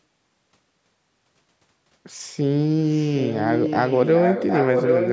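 From 2.88 s to the end, a second copy of the speech comes back about 0.76 s late, only a bit quieter than the original. That's an echo leak, likely a loudspeaker on the far end whose echo canceller let its microphone pickup slip back into the call.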